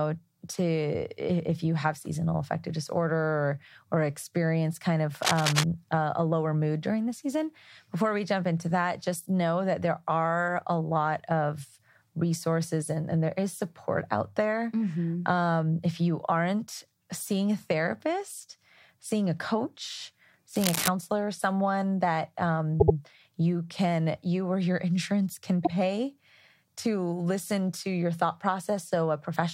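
A speech recording with two kinds of fault. Scratchy, rustling bursts about as loud as the speech appear from 5.22 to 5.64 s, between "or experience kind of" and "a a lower mood", and again from 20.56 to 20.88 s. This is cable scratch noise, likely from a worn cable or connector whose contact resistance jumped as it moved. Stutters follow. After "someone that", a 78 ms slice plays twice more (22.79–22.95 s) before "you can you or". After "insurance can", a 52 ms slice repeats once at 25.64 s. These are repeated frames, where the decoder replays the same compressed audio, adding about 0.16 s and 0.05 s.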